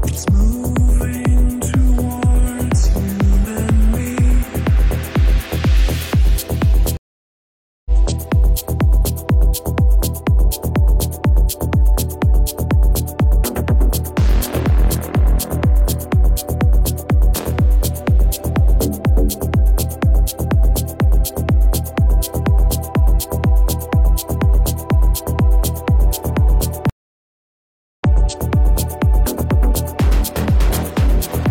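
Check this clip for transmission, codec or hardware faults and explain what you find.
Two stream reconnect faults. At 6.97 to 7.91 s and 26.90 to 28.04 s the sound drops out for about 0.89 s and 1.1 s, then resumes roughly 0.7 s and a second further on. The broken connection forced a fresh mid-stream decoder start.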